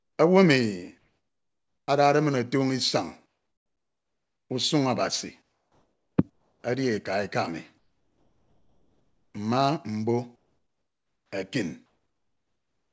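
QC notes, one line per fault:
0.00–0.18, 0.98–1.88, 3.26–4.50, 5.42–6.18, 6.30–6.64, 7.78–9.34, 10.36–11.32 and 11.86–12.93 s: comfort noise in place of the background. In each pause, the real room tone gives way to a smooth, featureless hiss, about 2 to 13 dB quieter, likely because the sender stopped transmitting during silence and the receiver synthesised a noise fill. On a spectrogram, the gaps show flat, even noise below 8 kHz. The waveform shows a steady low floor that steps down between phrases.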